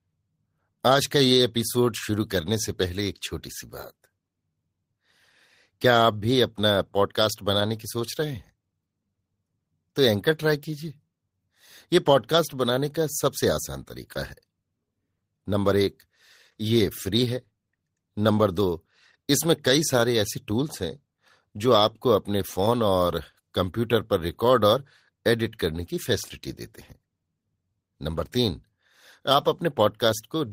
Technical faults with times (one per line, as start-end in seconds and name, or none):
none